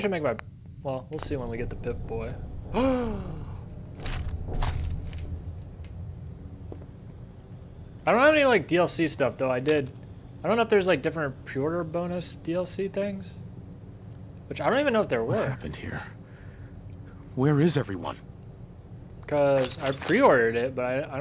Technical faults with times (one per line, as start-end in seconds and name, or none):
none